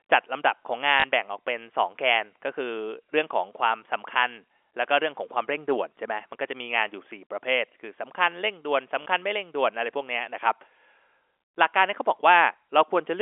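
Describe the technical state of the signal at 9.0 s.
Right at 9.02 to 9.06 s there's a short dropout handled by packet loss with the last packet repeated. About 40 ms of audio went missing, which fits two 20 ms packets, and the receiver just replayed the previous chunk to fill it. Because the same chunk repeats every 20 ms, the stretch takes on a brief 50 Hz buzz, a quick robotic stutter inside the narrow telephone-band G.711 sound.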